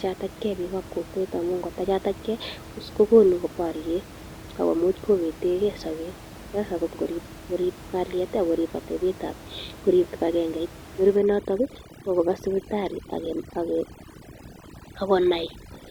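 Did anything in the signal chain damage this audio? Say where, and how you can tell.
Yes. From 11.16 s, just after "korip kibagengeit", to the end at 15.90 s, the background drops to near silence with twinkling specks. This is overdone noise removal at the call-processing stage: a suppressor set too hard against room noise about 18 dB below the speech mutes individual frequency bands near its noise estimate, and quieter parts of the speech vanish with them.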